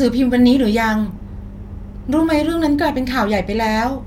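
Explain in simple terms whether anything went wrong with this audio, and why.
Listening to the speech in this recording, nothing stood out as having gone wrong.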